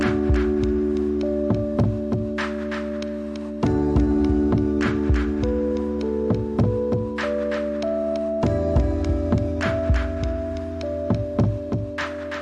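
From start to finish the audio carries a doubled audio track: a second, full-band copy trails the original by roughly a third of a second and sits a few decibels lower, about 5 dB down. The trailing copy has no decay or room colouring, so it reads as a clean, detached repeat rather than reverb. The likely cause is the same signal reaching the mix twice, once through a slower path that runs out of step.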